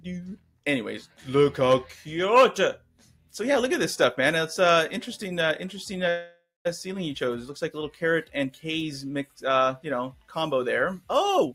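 A speech-tuned noise suppressor stays on for the whole clip, treating steady parts and tails as noise, so the level keeps swinging by about 5 dB and the sound pumps.

That same suppressor turns the sound down further at 0.36–0.6 s and 2.78–3.33 s (drops of about 12 dB) and at 10.13–10.32 s (about 11 dB), where held or fading parts sink and decays get clipped.

From 6.09 to 6.67 s there's a call audio freeze, likely from delayed packets draining the jitter buffer. The last sound is stretched out and fades, including about 200 ms of silence. Then playback resumes 557 ms later with nothing lost.

At 11.37 s a jitter buffer speed-up kicks in, trimming about 150 ms of small pitch-period chunks so the sound runs at roughly double speed without a pitch change.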